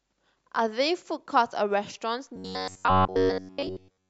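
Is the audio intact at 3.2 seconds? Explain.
No. At 3.2 seconds the speech is inside a stretch of robotic sound from repeated short buffers that runs from 2.36 s to the end of the clip. The likely cause is new audio arriving too seldom, so the playback fills the gaps by looping a short slice, about 10.7 ms long, while the real signal is skipped. Essentially all of this span is repeated material. The looping imposes a fixed 93.8 Hz pitch, heard as a rigid metallic buzz that only loosely tracks the speech.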